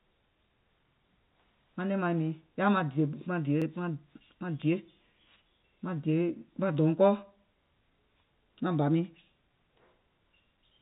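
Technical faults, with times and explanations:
3.62 s and 7.66 s, overlapping chunks: the audio is handled in 4-second chunks, and each one begins about 44 ms before the previous one finished, so that 44 ms stretch plays twice at both joins. The repeated slice sounds like a brief stutter with a click at the seam.
4.62 s, bit error spike: a single sample jumps sharply to a wrong value and snaps straight back, as if one bit was flipped in storage or on a digital link. It is heard as one sharp, broadband tick unrelated to the speech around it.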